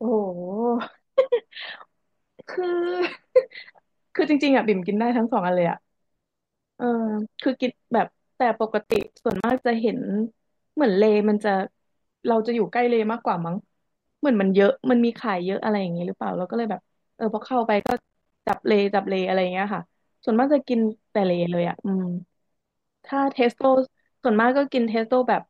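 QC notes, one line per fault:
8.84–9.64 s, processor overload crackle: the processor falls behind and misses buffer deadlines many times in a row. Each missed block plays as a short hole of silence with hard edges, so the speech turns gritty and torn for under a second. The spacing suggests buffers of around 10 ms, with a few dozen dropped.
17.80–18.54 s, processor overload crackle: the same overload returns. Another dense run of silent gaps chops the speech into crackle until the load clears.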